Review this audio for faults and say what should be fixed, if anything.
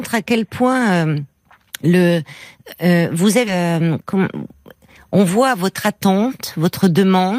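At 3.47 to 3.49 s the speech has a skip ahead: about 0.7 s of audio is dropped and the two sides are spliced directly, with no silence or fill. A dropout leaves a gap; here nothing pauses. Prevent it by sizing the jitter buffer so bursts don't overflow it.

From 3.57 to 5.13 s a jitter buffer speed-up plays the speech at about 107% by trimming short pitch-period pieces, removing roughly a tenth of a second in total. Pitch stays unchanged, which separates it from a resampling error. Prevent it by smoothing packet delivery so the buffer doesn't overfill.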